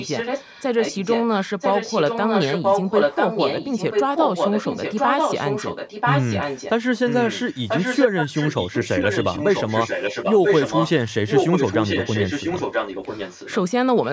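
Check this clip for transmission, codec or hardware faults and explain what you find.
There's one real problem here, an echo leak running through nearly the whole clip.

You hear it at 0.00–1.24, 1.45–6.70, 7.07–10.91, 11.11–13.59 and briefly at 14.02–14.09 s: a copy of the speech trailing by 988 ms. It's roughly as loud as the speech itself from 1.45 to 6.70 s, a bit quieter in the other long stretches, and very faint in that last fragment. That's likely a far-end speakerphone whose echo canceller let its own mic pickup back into the call.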